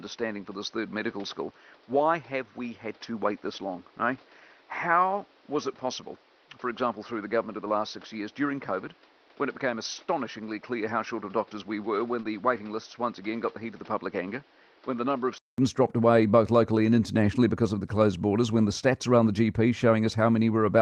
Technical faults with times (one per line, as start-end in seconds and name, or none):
0.00-15.58 input switched to a poorer device
12.21-12.25 short concealed packet loss
12.23-12.25 lost packet rebuilt from error correction
16.87 lost packet rebuilt from error correction